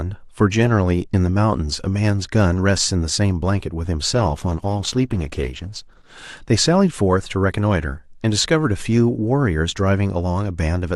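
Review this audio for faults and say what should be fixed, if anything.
From 4.14 to 6.14 s the speech switches to an adaptive stream at a lower bitrate. For those two seconds codec artefacts rise, which fits a drop from a high Opus rate to one near 12 kbit/s. The player fetched a cheaper rendition when throughput dipped. Unlike packet loss, there is no gap or glitch: quality changes abruptly at both edges while the audio stays continuous. To prevent it, give the stream more buffer headroom and set a higher minimum bitrate rung.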